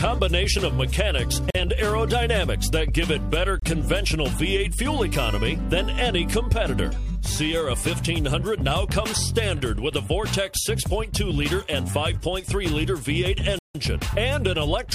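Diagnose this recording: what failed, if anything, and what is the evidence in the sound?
Three dropouts to dead silence, at 1.50 to 1.55 s, 3.60 to 3.62 s and 13.59 to 13.75 s, the last a good 160 ms. That's likely a Bluetooth stall on the wireless link: packets held up, the headphone buffer ran dry, and playback paused until they arrived.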